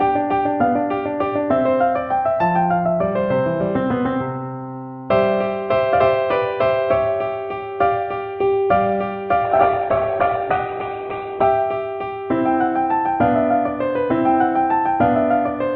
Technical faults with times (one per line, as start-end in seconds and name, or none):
9.44-11.44 adaptive stream at a lower bitrate